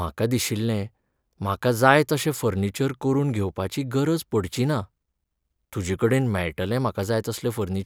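Listening to this speech recording, nothing stood out as a technical problem at any point.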